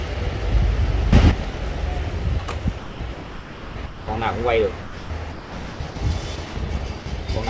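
At 1.13 s the level steps up by about 10 dB with no ramp, and the background rises with it in the same instant, so the change is applied to the whole signal rather than to the source alone. It holds until 1.31 s and then falls back just as abruptly. This is a sudden gain jump, likely a digital gain setting switched directly from one sample to the next instead of being faded in.

From 1.52 to 1.54 s, a 20 ms piece of the sound is missing, filled with steady synthetic hiss. At 7.00 to 7.06 s a further 60 ms goes the same way. Both are sound dropped by the voice detector. The sender likely judged these quiet portions to be background, stopped transmitting, and the receiver substituted comfort noise until detection resumed.

Three stretches are sound chopped by the voice detector: 2.78 to 4.08 s, with about 1.08 s replaced in total; 4.82 to 5.96 s, about 820 ms; and 6.36 to 6.56 s, about 100 ms. 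Within each, the detector likely toggled between sending and muting repeatedly. The sound breaks up into fragments.

Throughout, nothing is heard above 8 kHz, which points to a 64 kbit/s G.722 call path.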